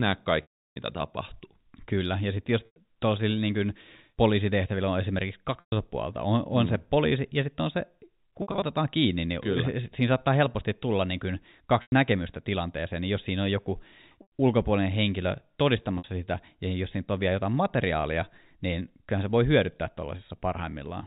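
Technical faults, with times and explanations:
0.42 to 16.04 s, packet loss with pitch repetition: gaps at 0.42 to 0.76 s (before "mitä tapahtuu"), 2.66, 5.6, 8.42 (scattered over 0.2 s), 11.82 (after "helposti tulla niin kuin"), 14.22 and 15.98 s (before "sitä ja jos siinä"). The receiver loops the last pitch period, producing a buzzy held tone. On a spectrogram, this looks like frozen harmonic bands, and the waveform shows identical repeating cycles. The 0.34 s gap fades into silence over the telephone band.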